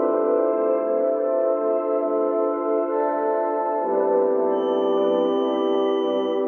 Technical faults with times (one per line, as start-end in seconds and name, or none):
4.48-6.48 feedback whistle